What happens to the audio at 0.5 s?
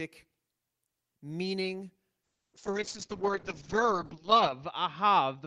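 Nothing goes wrong at 0.5 s; the speech there comes through intact, with no dropout, click or distortion.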